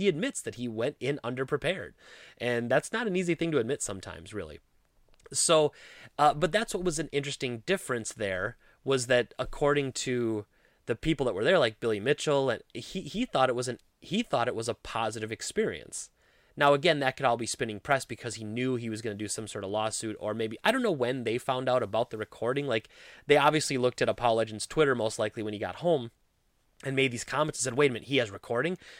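A recording of speech, with no technical fault to point to anywhere in it. Nothing audible calls for a time or a cause.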